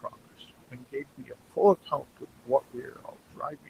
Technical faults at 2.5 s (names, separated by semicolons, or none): noise suppressor artifacts; speech cut by the noise suppressor